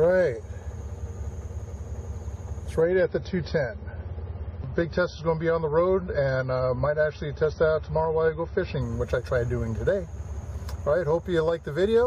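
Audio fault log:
2.82 to 8.82 s, adaptive stream at a lower bitrate: the treble abruptly vanishes above 5.9 kHz and codec artefacts thicken for six seconds, then full quality snaps back without a gap. The player switched to a far leaner MP3 version, consistent with roughly 23 kbit/s.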